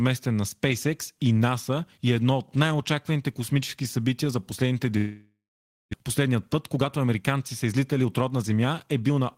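From 4.97 to 5.95 s the speech dissolves into a fading buzz, then half a second of silence. This is likely a long network dropout, with 0.6 s lost. From 6.03 to 9.35 s a jitter buffer speed-up repeatedly cuts out pitch periods. Speech runs 9% fast at unchanged pitch, shedding roughly 0.3 s.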